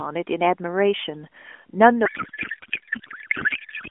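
Speech over an AMR narrowband mobile link, band-limited to roughly 250 Hz to 3.4 kHz, with light codec coloration consistent with the 12.2 kbps mode. From 2.06 s to the end of the clip there is a codec payload misread. The frames were packed octet-aligned but are being unpacked as bandwidth-efficient, so every field is shifted and the decoder synthesises garbled noise and warble that barely follows the talker. On a spectrogram the clear harmonics and formant tracks give way at 2.06 s to a smeared, noisy texture still capped below 4 kHz. On the waveform the envelope stops following syllable rhythm.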